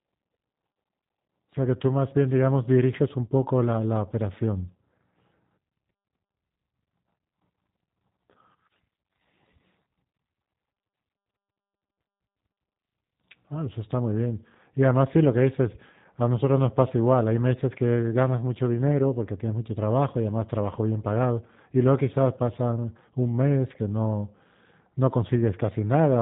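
From start to finish, the speech carries the sound of the G.729 codec, and the damage is plainly audible. The codec does not store the waveform. It rebuilds each short frame from a vocal tract filter, a pitch predictor and a few pulses, which fits an 8 kbit/s stream. Nothing passes above 3.8 kHz, so sibilants lose their edge. Voices come out rough, buzzy and faintly synthetic.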